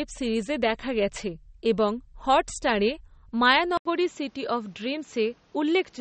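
From the start, the speech has a watery, swirling texture, with s sounds that chirp and smear, and nothing above 8.4 kHz. That is plainly audible codec damage, likely from MP3 compression at a low rate, which fits 32 kbps. Short of bits, the encoder removes all treble above a fixed cut-off and drops weak frequency lines that blink on and off between frames, which produces the swirl and the softened attacks.

At 3.77 s the sound stops for 80 ms, then returns duller and narrower, now with nothing above 7.6 kHz and faint new background noise well below the speech, while the loudness stays about the same. This likely means the input switched to a poorer device, a different microphone or a headset's call profile with a tighter band and its own noise, and that sound continues to the end.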